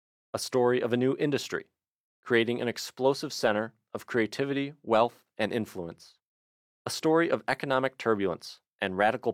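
No technical faults are audible anywhere in this speech recording.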